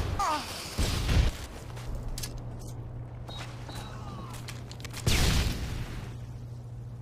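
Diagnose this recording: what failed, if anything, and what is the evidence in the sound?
The analogue wiring failed: a ground loop or a nearby transformer is coupling the power line into the signal path. The result is mains hum, a steady low tone at 60 Hz with some low harmonics, which appears at 1.62 s and continues to the end of the audio. It sits only about 10 dB below the wanted sound, so it is loud. Its unchanging pitch and level point to a wiring or grounding fault rather than a digital one.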